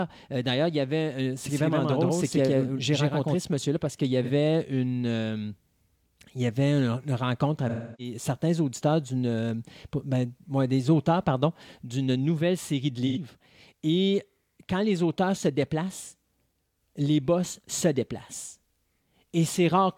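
From 1.46 to 3.36 s the speech is heard twice. A second full-band copy trails the first by roughly a tenth of a second, at about the same level. It has no decay or room colour. It begins and ends abruptly. This is a doubled audio track. The likely cause is a second capture through a slower path, or an edit that left two copies out of step.

Next come three AAC frame losses with concealment. The first runs from 4.23 to 4.30 s and lasts about 43 ms, which fits one lost frame. The second spans 7.69 to 8.14 s, about 300 ms, consistent with seven frames. The third sits at 13.07 to 13.18 s, about 85 ms, matching two frames. In each gap the decoder rebuilt the missing audio from the last good spectrum. The two short patches sound smeared, noisy or phasey instead of clean.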